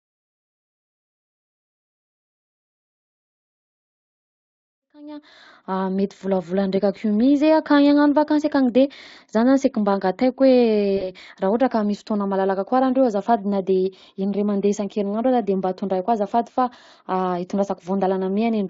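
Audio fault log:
10.97–11.11 s, VoIP packet loss concealed by the speech codec: about 40 ms of speech lost; the decoder extrapolated and faded the signal, leaving a brief buzzy or noisy, weakened stretch.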